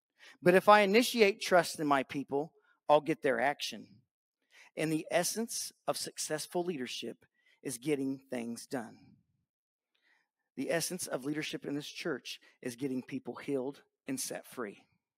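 Nothing goes wrong anywhere in this one, so there's nothing to flag from the first moment to the last.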